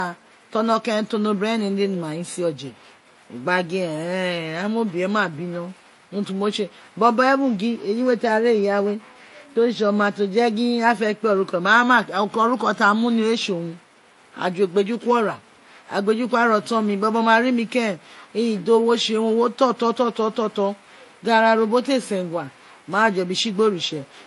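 Throughout the speech, nothing sounds above 11.3 kHz. Two kinds of coding artefact are heard together. This points to transcoding between lossy codecs, likely MP3 then Vorbis near 48 kbit/s, the later one compounding the earlier one's damage.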